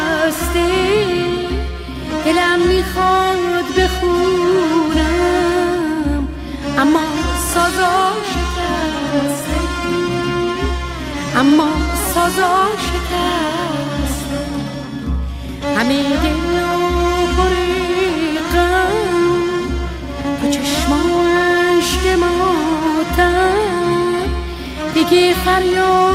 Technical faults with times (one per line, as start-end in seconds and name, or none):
none